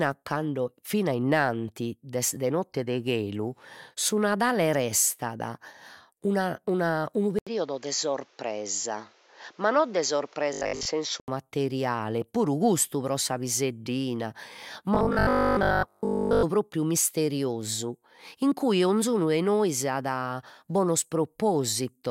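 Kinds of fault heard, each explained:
Input switched to a poorer device, 7.39 to 11.28 s: after an 80 ms silence the sound turns dull, with a new noise floor about 35 dB down at much the same level, likely a narrower-band microphone or headset.
Robotic sound from repeated short buffers, 10.53 to 10.87 s and 14.95 to 16.45 s: the sound becomes a rigid metallic buzz at 50 Hz, which fits a 20 ms buffer being replayed, likely because audio arrived late and most was replaced by repeats.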